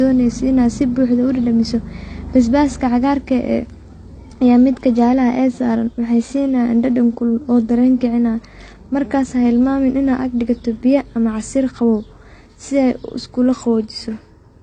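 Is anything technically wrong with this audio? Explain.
Yes. Throughout the speech, nothing reaches above 9.6 kHz, and the smeared, swirly artefacts of two coders sound stacked. This is likely transcoding between lossy codecs, consistent with a low-rate AAC encode re-encoded as HE-AAC. The later pass keeps the earlier cut-off and adds its own artefacts. A spectrogram shows a flat ceiling at 9.6 kHz with patchy, blocky texture beneath.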